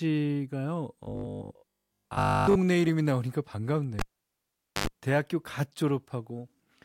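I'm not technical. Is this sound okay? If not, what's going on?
No. From 1.03 to 2.57 s there is robotic sound from repeated short buffers: the voice becomes a steady metallic 50 Hz buzz, likely from tiny 20 ms chunks replaying. Unlike a dropout, it never goes silent. From 3.99 to 4.87 s the cable is pulled and plugged in: a pop, about 0.83 s of near silence, a brief 50 Hz mains hum, and another pop as sound returns.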